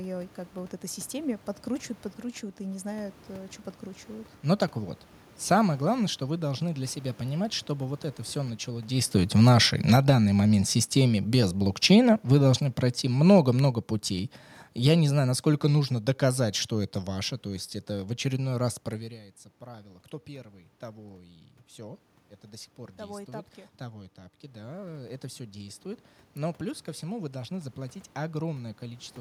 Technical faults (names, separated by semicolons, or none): automatic gain falling; automatic gain rising